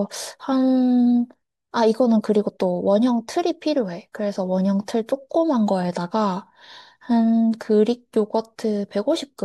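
No technical faults are audible anywhere in the recording.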